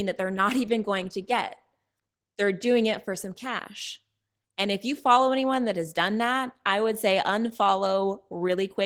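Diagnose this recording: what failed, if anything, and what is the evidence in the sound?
The codec stage is at fault: Opus voice compression running starved in hybrid mode, with SILK predicting speech below 8 kHz and a thin CELT layer above. Throughout, the speech sounds hoarse and faintly robotic with smeared highs, which fits about 16 kbps.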